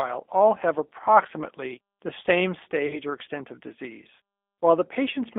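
Speech heard through a G.729 codec, probably the G.729A variant at 8 kbit/s. The band runs from about 250 Hz to 3.5 kHz, with a plainly rough, synthetic texture that separates it from simple band-limiting. From 2.87 to 2.98 s, between "have approximately the same" and "or extent of disease", VoIP packet loss concealed by the speech codec stretches the sound into a fading buzzy tone or coloured noise. A single lost packet of about 30 ms would explain it. Unlike a hard dropout or click, the sound stays weak or distorted after the gap while the decoder recovers.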